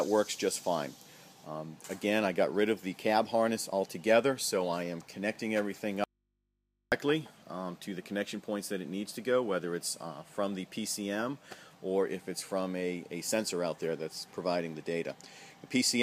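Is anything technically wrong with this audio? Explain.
Yes, there's one problem. From 6.04 to 6.92 s there's an audio dropout to a faint residue. The sound cuts out abruptly for about 0.88 s, leaving only mains hum roughly 50 dB below the normal level, then snaps back. The likely cause is the signal being lost while the path after the break stayed live, so the open input's hum came through.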